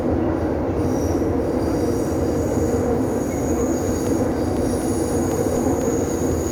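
From 4.07 s to 6.32 s the everyday sound is punctured by a steady train of small ticks, one every 0.25 s, about ten in all, heard only while sound is present. These are periodic USB or driver dropouts: something blocks the USB bus or audio driver at a fixed interval, and each time a couple of milliseconds of audio goes missing and is replaced with silence. The sudden gap and restart at each loss produce the regular clicks.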